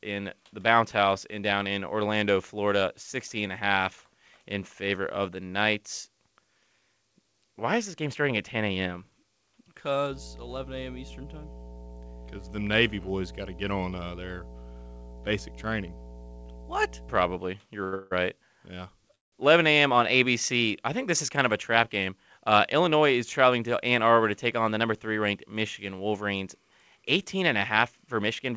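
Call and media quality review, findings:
Steady 60 Hz mains hum, 10.09–17.39 s, roughly 15 dB below the speech. Ground loop or transformer coupling of the power line into the capture chain.

Sound held at 17.84–17.94 s, stretched 84 ms; short stall from a late packet. Jitter buffer ran dry and stretched the last sound until the packet arrived, with nothing lost.

Call audio freeze at 17.94–18.13 s: held sound fades, 166 ms inserted. Second at 19.15–19.34 s: about 170 ms silent, 172 ms inserted. Likely delayed packets emptying the jitter buffer, playback resuming where it stopped.

Hurried delivery at unchanged pitch; jitter buffer speed-up, 21.30–23.45 s at 106% (roughly 150 ms cut) and 27.03–28.52 s at 105% (about 100 ms cut). Receiver trimming pitch periods to drain excess buffered delay.

Band limit at 8 kHz from the wideband call codec.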